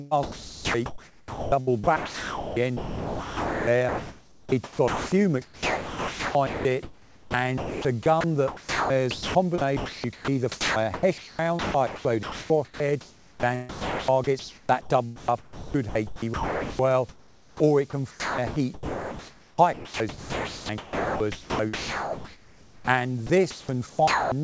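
Sound chopped by the voice detector runs through 0.23–5.12 s, 5.42–13.43 s, 13.69–14.9 s, 15.16–16.79 s, 18.11–22.88 s and 23.27–24.32 s, with roughly 3.75, 4.77, 0.81, 1.14, 3.9 and 0.54 s of material swapped for flat hiss, most likely because the sender's detector kept toggling transmission on and off. Comfort noise in place of the background appears at 17.09–17.6 s, where the real ambience, sitting about 29 dB below the loudest sound, drops to a featureless synthetic hiss about 6 dB quieter. An onset clipped by the voice detector follows at 17.55–17.6 s, where 50 ms of the sound's soft start is missing and it begins abruptly. Across the whole clip, nothing is heard above 8 kHz, which fits the G.722 codec at 64 kbps on a call path.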